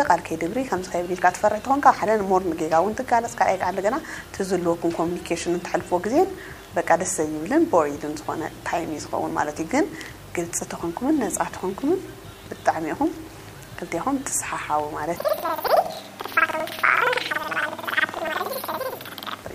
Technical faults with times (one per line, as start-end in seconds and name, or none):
15.16-19.46 planar audio read as interleaved